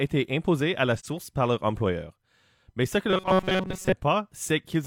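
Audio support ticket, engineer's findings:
AAC frame loss with muting, 0.97 to 1.05 s: a soft-edged gap of about 43 ms, consistent with one lost frame. The decoder zeroed that frame's spectrum, and the overlapping windows faded the speech out and back in.

Robotic sound from repeated short buffers, 3.10 to 3.93 s: a rigid metallic buzz at 188 Hz. Likely an underrunning playback buffer looping about 5.3 ms of audio while most of the real speech is skipped.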